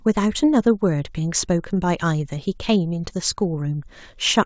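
The speech carries no audible technical faults.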